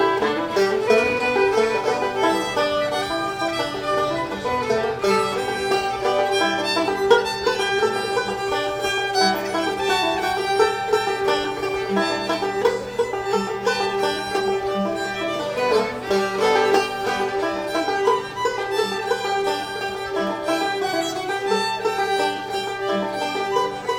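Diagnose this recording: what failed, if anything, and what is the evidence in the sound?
Nothing in the recording points to a failure at any stage of the chain. No event in the sound stands out as evidence of a fault, so there is nothing to trace to a mechanism.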